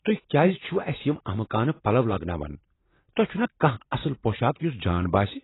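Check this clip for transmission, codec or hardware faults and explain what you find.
One fault runs through the whole speech clip: likely AAC compression at a very low bitrate, consistent with about 16 kbps. Nothing survives above 3.9 kHz, and the starved quantiser leaves a warbling, smeared texture, which a plain low-pass filter wouldn't add.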